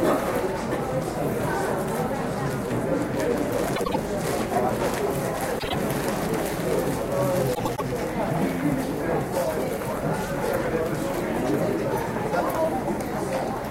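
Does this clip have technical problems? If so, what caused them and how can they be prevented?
Yes. Three brief garbled flutters interrupt the sound: 3.76 to 3.96 s, 5.59 to 5.75 s, and 7.55 to 7.82 s. These are frames out of order. In each spot, two neighbouring blocks of decoded audio were played back swapped, about 78 ms, 52 ms and 105 ms long respectively, which points to runs of three, two and four codec frames. The halves are exchanged with nothing lost, so the overall timing stays intact. Prevention: carry sequence numbers or timestamps with each frame and have the receiver reorder them in a jitter buffer before decoding.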